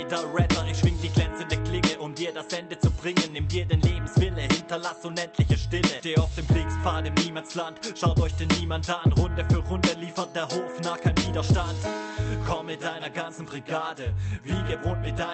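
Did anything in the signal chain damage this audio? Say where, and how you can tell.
No, no damage detected.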